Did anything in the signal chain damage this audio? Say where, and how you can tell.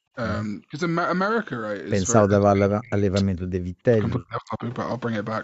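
Yes. Right at the start, from 0.00 to 0.15 s, the room background drops by about 25 dB and then returns. This is background gated by the echo canceller in the call processing stage. While the far-end loudspeaker signal was active, the canceller's suppressor pulled the microphone gain down hard. Because it attenuated the whole microphone feed rather than subtracting only the echo, the ambient floor disappeared for that short stretch.

The speech itself is pushed down three times: from 0.60 to 0.76 s by something like 20 dB, from 2.24 to 3.54 s by roughly 35 dB, and from 3.90 to 4.64 s by around 30 dB. This pattern is most likely speech suppressed in double talk. The canceller could not tell the near talker from loudspeaker echo and clamped both. The top of the band stops near 8 kHz, as expected from the call codec path.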